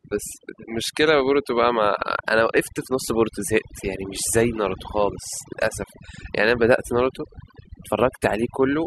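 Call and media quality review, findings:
Overdone noise removal, whole clip. Background drops and breaks up, with twinkling specks between phrases. Denoiser set too aggressive. Bands near its noise estimate get cut hard, taking quiet speech detail with them.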